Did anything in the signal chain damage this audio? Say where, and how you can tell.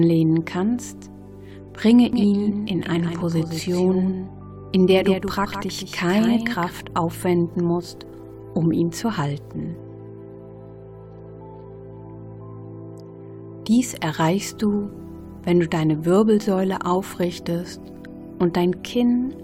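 Yes. Doubled audio track from 2.13 to 6.71 s: a dry copy trails roughly 150 ms, about 5 dB down, cutting in and out abruptly. Likely a slower duplicate capture path.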